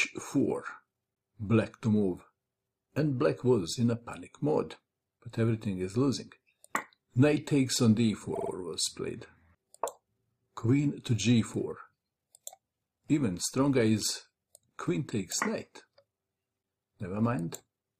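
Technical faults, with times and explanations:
8.35–8.50 s, repeated frames: a 52 ms chunk, which fits two compressed frames, plays three extra times in a row, so it stutters and runs 157 ms longer.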